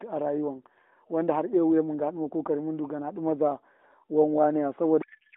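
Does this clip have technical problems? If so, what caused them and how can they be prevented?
Yes. A codec payload misread runs from 5.02 s to 5.36 s, the end of the clip. The narrowband AMR speech, limited to about 250 Hz to 3.6 kHz, abruptly turns into garbled noise and warble. This fits octet-aligned AMR frames being unpacked as bandwidth-efficient, which puts every field in the wrong place. To prevent this, make both ends negotiate and use the same AMR payload format, for example by honouring the octet-align parameter in the session description.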